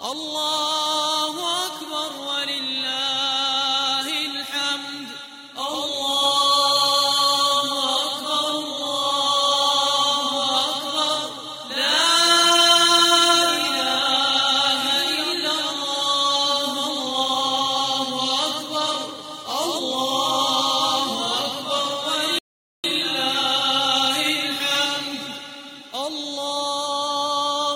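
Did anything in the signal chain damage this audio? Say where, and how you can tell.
Yes. A rebuffering stall occurs at the playback stage. At 22.39 s the sound cuts to silence, and it picks up again at 22.84 s. That adds about 0.45 s of dead air. When it resumes, it carries on from exactly the point where it stopped. No material is skipped and nothing is repeated. This points to the player draining its downloaded buffer and pausing until more data arrived. The audio itself was not corrupted.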